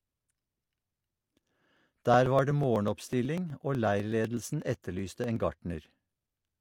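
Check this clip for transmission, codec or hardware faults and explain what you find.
There are periodic USB or driver dropouts from 0.16 s to 6.48 s. Every 0.12 s, about a millisecond of audio is skipped. Something blocks the USB bus or audio driver on a fixed cycle. The joins produce a steady run of ticks, several per second, audible over the speech.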